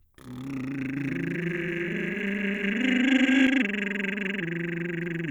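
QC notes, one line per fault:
0.97–3.47 s doubled audio track: the music plays twice, a dry full-band copy trailing roughly 300 ms behind at about equal level, with no decay or room colour, cutting in and out abruptly; likely a second, slower capture path mixed in.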